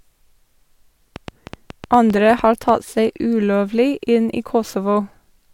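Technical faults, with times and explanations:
1.16–2.70 s, train of clicks: about ten sharp clicks of much the same shape arrive at roughly 6.5 per second, spaced unevenly, and stand out above the speech, peaking around 5 dB louder than it. They tick through pauses as well as sound, so they sit on top of the audio. The cause is likely interference from nearby equipment or a faulty connection or power supply. Unlike random crackle, these clicks repeat one shape and stop after about 1.5 s.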